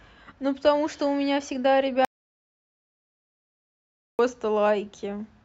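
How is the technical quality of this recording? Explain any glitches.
The recording has one serious glitch: an audio dropout to silence from 2.05 s to 4.19 s. For about 2.14 s the speech stops dead and is replaced by silence with no room tone, most likely because the input was lost while recording continued. On a waveform it shows as a flat line; on a spectrogram, a blank band.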